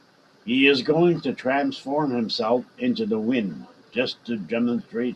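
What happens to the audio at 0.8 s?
Nothing goes wrong at 0.8 s: the speech continues intact through that moment, with no dropout, click, distortion or other fault.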